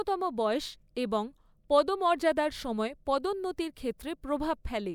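Speech with no audible faults.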